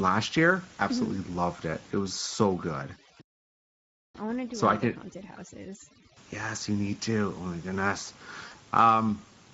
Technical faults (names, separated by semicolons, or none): Speex codec; overdone noise removal; playback stall; VoIP packet loss concealed by the speech codec